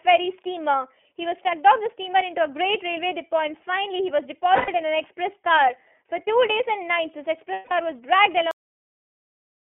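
iLBC codec, throughout: the speech passes through a narrowband 300 Hz to 3.4 kHz line and sounds slightly rough and synthetic, which fits iLBC's 13.33 kbps mode with 30 ms frames.

Lost iLBC frames, at 4.56 to 4.69 s and 7.53 to 7.72 s: the decoder covers gaps of 120 ms and 180 ms by repeating a pitch cycle mixed with noise. Each gap sounds like a held, buzzy vowel, and clean speech returns at once.

Cut-off end, at 8.51 s: the final buffers were never played, so the audio stops mid-sound and drops straight to digital silence without any decay.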